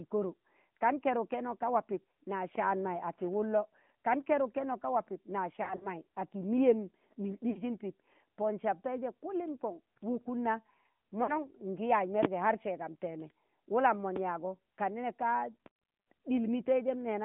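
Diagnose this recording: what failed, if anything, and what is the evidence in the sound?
Codec stage: the whole recording passes through the AMR narrowband mobile codec. The speech is confined to about 150 Hz to 3.5 kHz, and it has a buzzy, synthetic edge that points to a mid-rate AMR-NB mode near 10.2 kbps. The pulse-excited vocal-tract model audibly coarsens the voice.

Network stage: there are three sets of lost AMR speech frames. Sound smears and fades at 5.64–5.88 s, with about 80 ms missing in short runs of up to 40 ms. It does so again at 7.50–7.62 s (about 60 ms) and 11.24–11.45 s (about 40 ms). The decoder extends the last pitch and spectral settings at falling gain, then recovers roughly.

Analogue or driver stage: a loud pop sits on top of continuing audio at 12.23–12.26 s, 14.16–14.20 s and 15.66–15.70 s. Each is a single sharp transient, about 25, 20 and 15 dB above the signal in turn. 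The likely cause is a voltage step from a connector, switch or static discharge.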